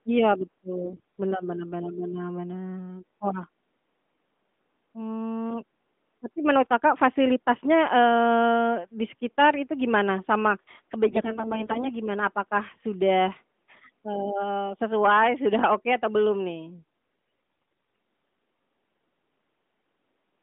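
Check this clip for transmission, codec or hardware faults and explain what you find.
Three short bursts of AMR bit errors are present, at 0.84 to 1.22 s, 11.08 to 11.90 s, and 17.62 to 17.81 s, on top of narrowband AMR coding that fits the 12.2 kbps mode and stops at about 3.5 kHz. During each burst the less-protected bits of the codec frames arrived corrupted, at an error rate of several percent, heaviest in the last burst, while the protected core still decoded. The excitation pulses and finer gain, pitch and spectral values come out wrong, so the speech keeps roughly its pitch and level but turns hoarse, scratchy and gargling.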